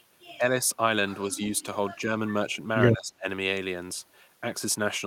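Speech suppressed in double talk at 0.38–0.42 s and 1.27–1.39 s: the speech dips briefly by about 5 dB, likely because the echo canceller was turning the talker down while the far side spoke.

Echo leak from 1.45 to 1.64 s: a faint copy trails the speech by 162 ms, far below it, likely loudspeaker echo that cancellation left behind.

Speech suppressed in double talk returns from 2.95 to 3.26 s, much deeper, at about 30 dB, so the speech nearly vanishes. This is likely the same ducking during simultaneous talk.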